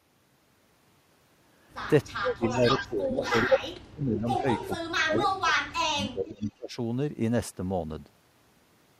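Speech suppressed in double talk runs from 2.16 to 6.73 s. The voice dips, thins and breaks up in pieces, adding up to about three seconds of lost or weakened speech, with the deepest drops around 35 dB. The likely cause is an echo canceller that met both sides talking at once and, unable to separate the local talker from loudspeaker echo, turned everything down.

Echo leak is heard at 2.51–2.86 s, 3.24–3.59 s and 4.27–4.73 s. Each is a copy of the voice delayed by 435 to 440 ms. The first sits slightly below the speech, the second slightly above it, and the third is faint, well below. The likely cause is a loudspeaker setup on one side whose echo canceller left part of the microphone pickup in place and sent it back.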